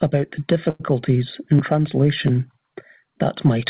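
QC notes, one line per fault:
0.70–0.82 s: short stall from a late packet. A packet arrived late, so the jitter buffer ran dry and the receiver held the current sound for about 96 ms before resuming where it stopped. Nothing is lost, but one sound is drawn out, with a faint buzzy or dipped texture. Everything after it runs about 96 ms later. The held segment stays inside the call path's 4 kHz bandwidth, like the rest of the speech.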